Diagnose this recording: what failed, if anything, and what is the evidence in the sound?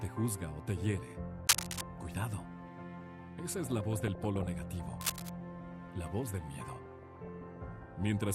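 Analogue wiring: there's cable scratch noise from 1.47 to 1.82 s and again from 5.01 to 5.30 s, dense uneven rustling that sits a bit above the sound the first time and roughly level with it the second. Likely a worn connector or lead being moved, with its contact resistance jumping around.

Reception and codec: DAB burbling runs from 3.48 to 4.47 s and from 6.83 to 7.57 s, that bubbly, squelchy chirping over the sound. Weak signal lets bit errors slip past error correction into the MP2 data, so individual sub-bands jump in level frame by frame.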